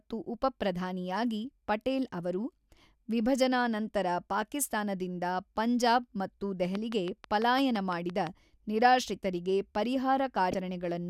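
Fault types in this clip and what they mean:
Train of clicks: From 6.75 to 8.28 s a steady ticking runs over the speech, with about ten sharp, near-identical pops evenly spaced at roughly 5.9 per second and peaking around 10 dB above the speech itself. Their regular spacing and matching shape point to a repeating outside pulse, likely electrical interference from nearby equipment or a faulty connection or power supply, rather than anything in the speech itself.
Damaged data in a compressed stream: At 10.50 to 10.54 s a brief glitch of about 34 ms interrupts the sound. This comes from a corrupted stretch of the encoded file or stream, where bytes were lost, zeroed or overwritten. The decoder misreads the frames there, loses its place and has to hunt for the next valid frame header. The short glitch is what that resynchronisation sounds like.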